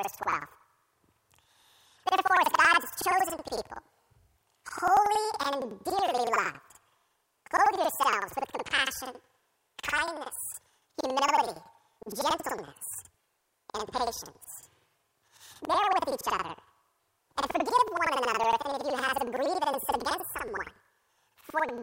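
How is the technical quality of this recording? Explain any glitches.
Technical quality is poor: for the whole recording the sound plays an octave high with a rapid flutter, about 10.8 times per second. This is planar audio read as interleaved. Each roughly 93 ms block stores all left samples and then all right samples, but it is read as alternating pairs. Every block therefore plays twice at double speed, left then right, so the overall pace holds while pitch jumps 12 semitones. The block length fits a 4096-sample block.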